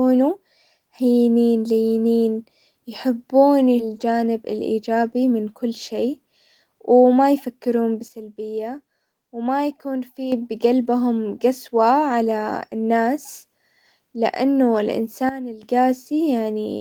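Speech recording with three kinds of fault. At 3.79 s the receiver dropped buffered audio in a skip ahead: roughly a second of speech is gone, and the two sides join directly with no gap. From 3.89 to 5.72 s a jitter buffer speed-up trims pitch periods to shed about 150 ms of backlog, so the speech runs 9% fast at unchanged pitch. A sudden gain jump, likely an unramped digital gain change, drops the level and background by about 8 dB from 8.08 to 10.32 s and by about 12 dB from 15.29 to 15.63 s.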